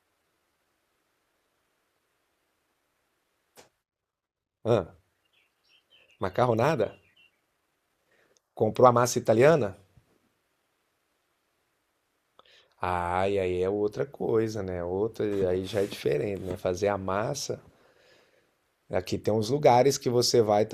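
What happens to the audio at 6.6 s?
A single sharp tick lands at 6.64 s: a bit error spike. One sample in the speech has a flipped bit, so its value leaps by a power of two, peaking at about -25 dBFS, and returns on the very next sample. Because it lasts one sample, the tick is broadband and unrelated to the surrounding sound. Unlike a dropout or buffer click, no audio goes missing and nothing repeats; the waveform continues exactly where it left off.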